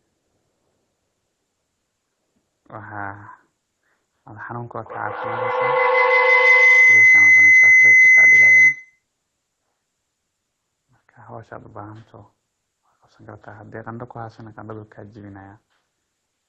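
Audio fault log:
4.84–9.06 s, feedback howl: two devices in one room looped microphone to loudspeaker with more gain than loss, so each pass returned louder, narrowing into a tone near 2 kHz over a loop delay of roughly 150 ms and peaking about 20 dB above the speech.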